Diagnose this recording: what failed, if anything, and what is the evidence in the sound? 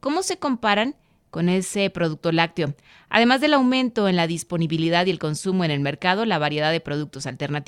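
Nothing failed: no stage from capture through playback leaves an audible defect anywhere in the speech.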